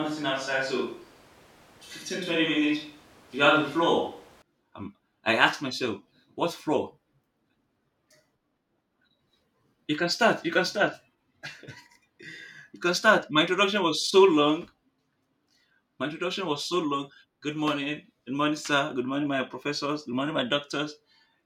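Switch to a distant microphone, start to 4.42 s: speech sounds roomy, hollow and bass-light, likely from a farther microphone replacing the close one, then snaps back.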